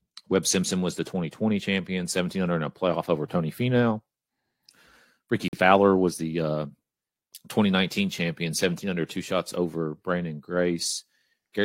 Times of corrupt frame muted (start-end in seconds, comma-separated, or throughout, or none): 5.48-5.59